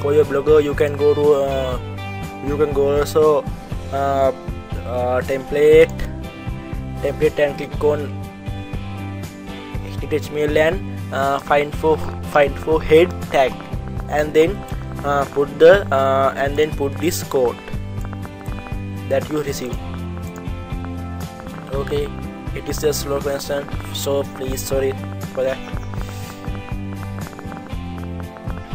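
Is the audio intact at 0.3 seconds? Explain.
Yes, the audio is intact at 0.3 seconds, with no dropout, click, distortion or other fault at that point.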